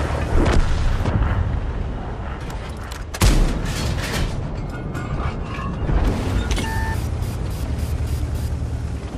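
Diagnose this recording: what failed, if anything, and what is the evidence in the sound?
Codec stage, throughout: dull, gurgling, granular sound as upper sub-bands flicker on and off, likely MP2 compression near 80 kbps. A plain low-pass would stay steady.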